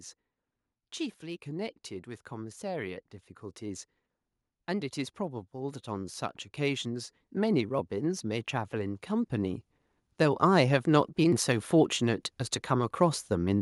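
Automatic gain rising: the gain control judged the speech input too quiet and raised its gain slowly three times, by about 3 dB from 1.2 to 3.89 s, about 6 dB from 6.56 to 9.65 s, and about 4 dB from 10.17 to 13.57 s. Voice and background swell louder together.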